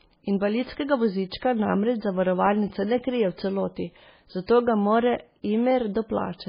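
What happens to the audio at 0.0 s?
From 0.0 s the speech carries heavy codec damage that lasts through the whole clip. Nothing is left above about 5.1 kHz. It likely comes from MP3 compression at a very low bitrate, around 16 kbps. Starved of bits, the encoder drops weaker frequency lines, and they flicker on and off from frame to frame. The result sounds watery and swirly. S sounds turn metallic and chirpy, and attacks smear.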